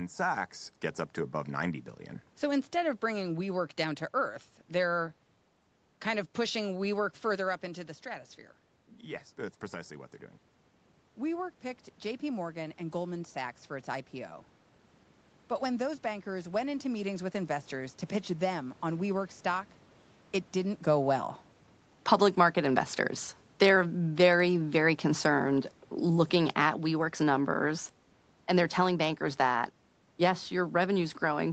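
From 20.86 to 29.69 s, automatic gain falling: the gain control judged the input too loud or its background noise too strong and eased its gain down by about 5 dB, so speech and background sink together.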